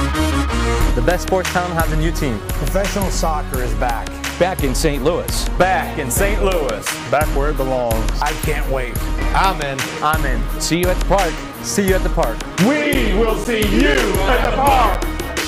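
From 12.94 s to about 14.95 s you get periodic USB or driver dropouts: short holes of around 10 ms, spaced exactly 0.5 s apart, about five of them in all. Something in the background is stalling the USB bus or the audio driver on a fixed schedule, and each stall loses a bit of audio that gets filled with silence. You hear it as a steady tick or pop that only shows up where there's signal.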